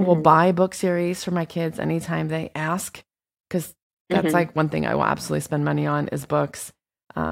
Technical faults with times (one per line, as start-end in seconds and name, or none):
none